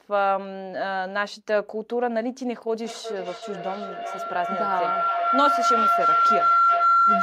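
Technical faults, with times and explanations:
2.84 s to the end, feedback howl: a shrill tone around 1.5 kHz swells up under the speech, pulsing roughly every 400 ms and peaking about 5 dB louder than the talker, and it never dies away. Two devices in the same room are on the call, so sound from one loudspeaker reaches the other microphone and comes back louder on each lap. The repeats narrow to the pitch the loop favours and keep growing until the end of the clip.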